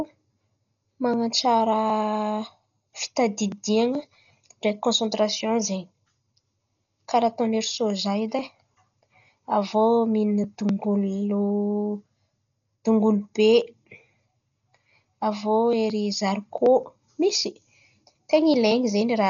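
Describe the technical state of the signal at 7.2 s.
At 7.2 s the speech carries Dolby Digital compression throughout, likely from a low bitrate around 40 kbps. Nothing sits above 6.9 kHz, so a spectrogram shows a hard ceiling there. Heavily starved frequency lines are filled with dither noise, giving dull, fluttering roughness around tones.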